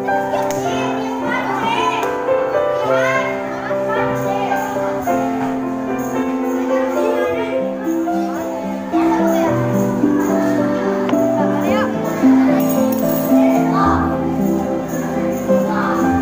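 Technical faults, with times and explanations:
6.23 to 9.02 s, channel delay (comb filtering): one channel lags the other by around 10 ms, and when the two are summed to mono, the shared content cancels at evenly spaced frequencies, starting low, near 40 Hz, and repeating roughly every 100 Hz upward. The sound turns hollow and phasey. Unlike flanging, the notches stay fixed rather than sweeping, and unlike a simple treble loss, the dips are spread regularly across the whole spectrum.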